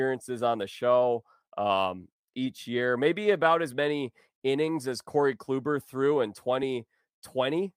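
Clock drift between sender and receiver runs through the whole speech clip. The sender's clock runs fast, by roughly 4 percent. Audio arrives quicker than the receiver plays it. Its jitter buffer keeps filling, so it must keep discarding material to catch up.

Repeated timing corrections follow from that, from 0.13 s to 7.67 s. The receiver trims short pieces again and again, always cutting, never repeating. The speech plays at about 104 percent speed overall. The cuts are unevenly spaced and heard as faint hiccups and a slightly hurried, uneven tempo.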